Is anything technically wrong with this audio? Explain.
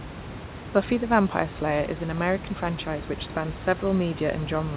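No, nothing in this speech stood out as technically wrong on listening.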